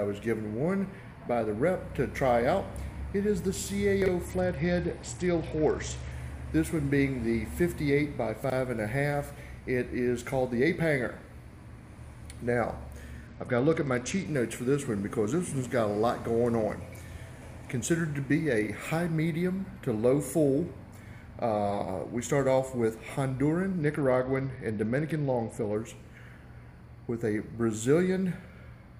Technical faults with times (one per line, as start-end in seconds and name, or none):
4.02-4.08 chunks out of order
4.25-6.12 Bluetooth SBC bit pool drop
8.44-8.52 chunks out of order
13.27-14.26 Bluetooth SBC bit pool drop
23.82-25.75 Bluetooth SBC bit pool drop